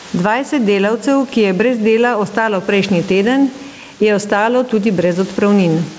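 Throughout the speech there is gain pumping: the input gain is likely set far too high, so a fast compressor or limiter clamps down on every loud syllable. The gain swings by roughly 10 dB, leaving the speech squashed and flat in level. Nothing is heard above 8 kHz, which fits a wideband call codec such as G.722.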